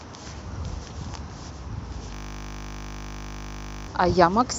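At 2.14 s the speech locks into a system hang loop until 3.88 s. The machine or driver stalled while the audio hardware kept replaying the same 20 ms slice of its buffer, some 87 times over, so you hear a flat buzz at 50 Hz.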